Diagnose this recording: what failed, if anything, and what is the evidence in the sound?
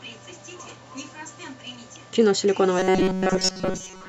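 From 2.79 s to the end, the speech becomes robotic sound from repeated short buffers. A rigid metallic buzz near 188 Hz appears. This likely points to a driver or buffer underrun. Chunks of about 5.3 ms repeat, and most real audio is skipped.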